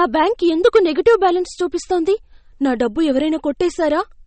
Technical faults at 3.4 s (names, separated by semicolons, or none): MP3 compression